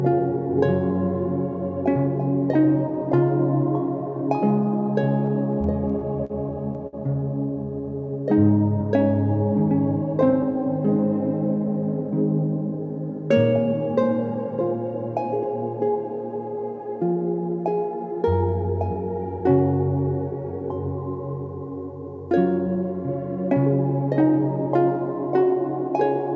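From 5.26 to 6.95 s, packets kept reaching the receiver late, so its jitter buffer ran dry eight times in that span and it had to stretch the last sound to cover each wait, about 187 ms in total and up to 58 ms in the longest gap. Nothing is lost, but roughly a tenth of that stretch is concealment, so the audio drags and stutters in small hitches. This is the repeated stalls (stutter) fault.

Twice more the buffer held more audio than it wanted, and the receiver trimmed it back with a jitter buffer speed-up, cutting out pitch-period-sized slivers in quick succession. From 10.23 to 12.12 s the audio runs at 103% speed, and from 22.58 to 23.56 s at 104%, each time losing around 50 ms. The pitch stays put. Throughout, nothing is heard above 8 kHz, which fits a G.722 call codec.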